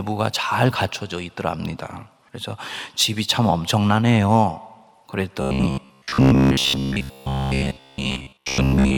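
Speech clip in which new audio likely arrives too seldom from 5.42 to 8.97 s, so short buffers repeat, giving robotic sound from repeated short buffers: a rigid 66.7 Hz buzz, fitting 15 ms repeats, replacing most of the audio.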